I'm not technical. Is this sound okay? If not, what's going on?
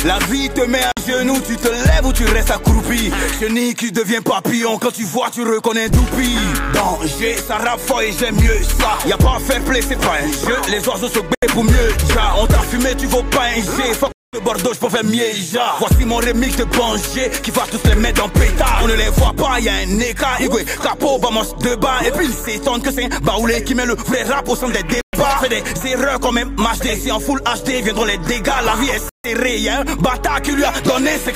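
No, it isn't. The sound drops out to silence five times, at about 0.92, 11.35, 14.12, 25.01 and 29.09 seconds, and then carries on where it left off. The gaps last from about a twentieth of a second up to a fifth of a second, with the one at 14.12 the longest. That pattern is likely a Bluetooth stall: interference delays the wireless signal, the headphones run out of audio to play, and they pause until it catches up.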